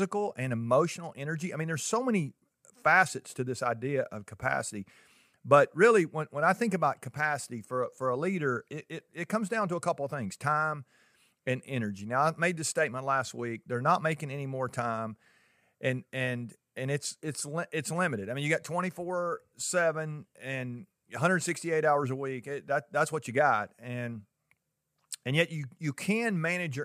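No technical faults can be heard anywhere in this speech recording. Nothing in the signal path calls for comment at any point.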